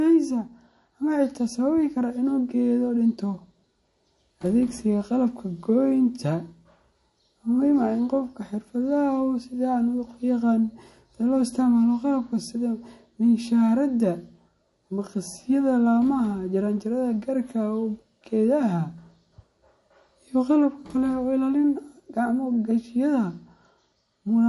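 Throughout, the speech has nothing above 11.3 kHz and sounds watery, with chirpy sibilants, likely MP3 compression at a low bitrate around 48 kbps.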